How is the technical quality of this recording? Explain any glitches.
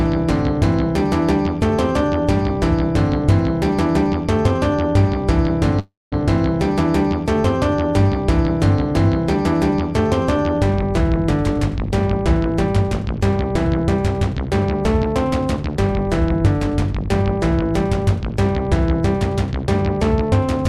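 Two network-related glitches affect the technical quality: a brief freeze and, later, a stretch of slightly accelerated playback.

From 5.79 to 6.14 s there is a call audio freeze. Packets likely stalled in transit and the jitter buffer emptied, so the receiver kept extending the last sound for about 324 ms. That extension decays into a fading buzz or hiss and then roughly 210 ms of silence. Playback then resumes exactly where it stopped, so the sound is delayed by that amount rather than cut.

From 11.59 to 20.31 s there is a jitter buffer speed-up. The buffer held more audio than its target, so the receiver repeatedly trimmed tiny pitch-period-sized pieces to shrink the backlog, removing about a third of a second in total. The sound runs at 103% of normal speed at unchanged pitch across those 8.7 seconds.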